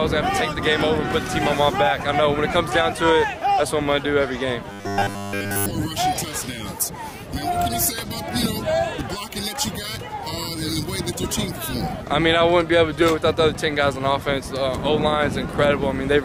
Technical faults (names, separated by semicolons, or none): robotic sound from repeated short buffers